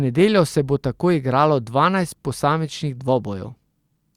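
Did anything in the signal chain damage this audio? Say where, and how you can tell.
No, nothing in this speech recording stood out on listening as damage from any stage of the signal chain.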